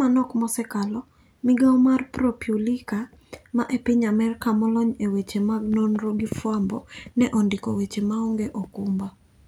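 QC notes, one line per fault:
No faults heard on this speech recording.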